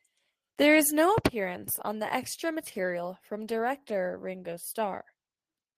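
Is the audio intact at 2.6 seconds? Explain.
Yes, at 2.6 seconds the audio is intact, with no dropout, click, distortion or other technical fault at that point.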